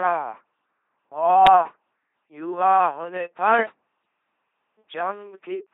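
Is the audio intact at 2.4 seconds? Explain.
No, LPC-10 vocoder damage runs through the whole clip, including 2.4 s. A ten-pole filter fed only buzz or hiss gives robotic speech, silent above 3.9 kHz, which fits a 2.4 kbit/s codec.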